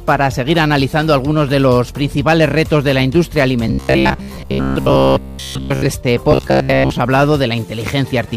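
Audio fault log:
throughout: hard clipping. The signal is driven about 6 dB past what the stage can pass, so its peaks are sliced flat. Under 1% of samples are affected, so the flattened tops add high harmonics that crackle on the loudest moments.
3.68–5.85 s and 6.32–6.90 s: robotic sound from repeated short buffers. The sound becomes a rigid, metallic buzz at 66.7 Hz that follows the material only loosely. This likely comes from 15 ms chunks being replayed in place of most of the real audio.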